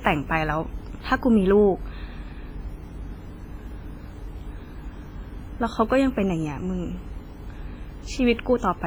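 From the start to the end of the speech there's heavy damage that sounds like WMA compression is the likely cause. The block-based transform spreads quantisation noise over tens of milliseconds, so consonants get a ringing, smeared edge and the whole thing turns washy. Quieter detail has been dropped outright, which fits a low bitrate around 24 kbps, and the leftover hiss swells and fades with the talker.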